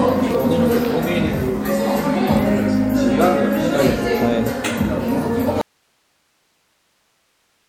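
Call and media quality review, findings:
Audio dropout to a faint residue from 5.61 s to end: signal cuts abruptly to hiss about 45 dB down, likely input lost while downstream path stayed live.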